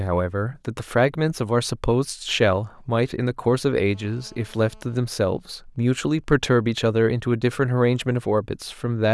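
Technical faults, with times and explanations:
3.95–5.00 s: GSM phone buzz. A nearby 2G phone in a call transmits bursts at about 217 Hz. The audio circuit rectifies the radio pulses. This gives a hard, raspy buzz with many harmonics, about 30 dB below the speech and unrelated to it.
5.04–6.72 s: GSM signalling bursts. The phone is still in the call, but its user is silent, so it sends only short groups of bursts. Rectified, these become even ticks with a longer 217 Hz buzz twice a second, roughly 40 dB down.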